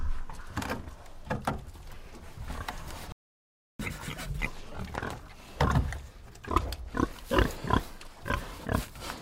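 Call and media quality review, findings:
Playback stall, 3.12 to 3.80 s: output drops to silence mid-flow for about 0.67 s, then resumes. Likely cause is a playback buffer underrun or a blocked audio thread, with the player starving for data until the backlog arrives.

Catch-up at higher speed, 3.80 to 4.47 s: the sound runs at 2x speed with pitch raised by about 10 semitones. The player is resampling its queued backlog to recover the time lost in the stall, then returns to normal rate.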